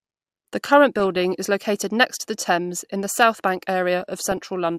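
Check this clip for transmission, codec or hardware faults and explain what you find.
One fault is present: DAB burbling from about 3.99 to 4.46 s, starting right after "in the south bank". Weak reception let bit errors slip past the error correction into the MP2 audio, so corrupted samples put short noise blips into single sub-bands and corrupted scale factors threw sub-bands up or down in level for up to a frame. The result is a burbling of noise blips over the speech, spread across roughly twenty frames, which fits an error rate of around half a percent.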